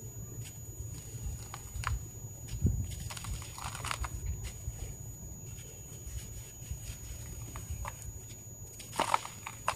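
From start to finish a switching supply whistle sits under the audio: a thin, high tone near 7 kHz, wandering between about 6.77 and 6.85 kHz and only about 10 dB below the wanted sound, so it is plainly audible. A nearby switching power supply is cycling at an audible rate, and its ripple leaks into the signal path. On a spectrogram it appears as a narrow, slightly wavering horizontal line across the whole clip.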